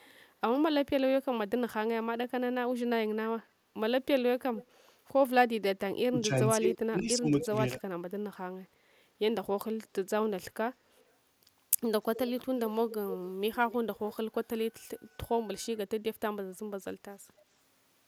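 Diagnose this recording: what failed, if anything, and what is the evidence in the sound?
Echo leak at 0.0–0.06, 4.57–4.66, 7.78–7.82, 10.98–11.04, 12.15–12.19, 12.58–13.28 and 13.71–14.15 s, in call processing: the speech returns 280–287 ms late, about 10 to 40 dB below the original. A loudspeaker-side echo canceller likely passed its microphone pickup back.

Speech suppressed in double talk from 6.09 to 7.53 s, in call processing: the speech dips in pieces totalling about 0.7 s, falling by up to about 25 dB. The echo canceller likely mistook both sides talking at once for loudspeaker echo and turned its own talker down along with the echo.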